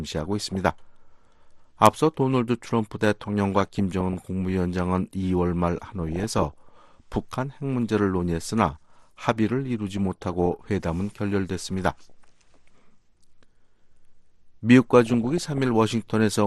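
DAB burbling occurs at 0.32–0.55, 3.28–4.28, 6.07–6.72, 9.97–10.47, 12.10–12.34 and 15.06–15.58 s. Bit errors slip past error correction and corrupt the MP2 sub-band data, giving bubbling, watery blips confined to narrow frequency bands. A dropout is different: there the sound gaps or mutes outright.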